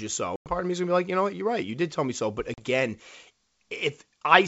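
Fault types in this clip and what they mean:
Packet loss on an ADPCM call: two hard-edged silent gaps, about 100 ms just before "of me is going" and 40 ms near 2.54 s. Each is followed by briefly distorted speech while the decoder's predictor resynchronises. A plain dropout would resume cleanly.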